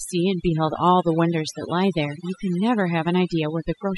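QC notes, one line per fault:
Throughout, overdone noise removal: the noise reduction was pushed far too hard, so any frequency band sitting close to the noise estimate gets pulled way down or shut off. The quieter bits of speech go too, leaving near-silent gaps with twinkling specks.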